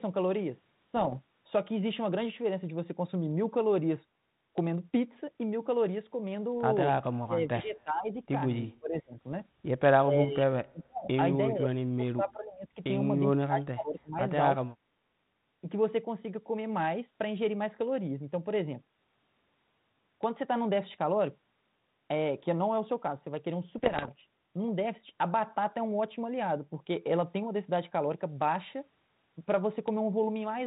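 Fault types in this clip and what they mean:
Bit errors on an ADPCM link: Flipped bits in the ADPCM stream knock the decoder's step size and prediction off track, so each error rings on briefly. Here it sounds like pops and rough, crackly bursts with sudden level jumps, around 0.96 to 1.17 s and 23.78 to 24.11 s.
Speech suppressed in double talk: The speech dips sharply, by as much as about 40 dB, in a series of drops between 7.2 and 14.7 s. Several last close to a second, and the final one is very short. The likely cause is an echo canceller turning the talker down while the far side spoke.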